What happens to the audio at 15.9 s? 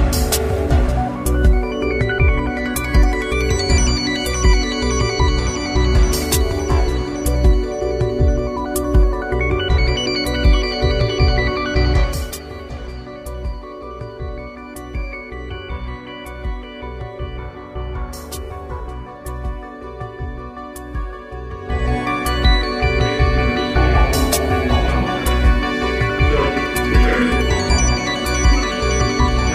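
Nothing goes wrong at 15.9 s; the audio plays through that moment intact, with no dropout, glitch or distortion.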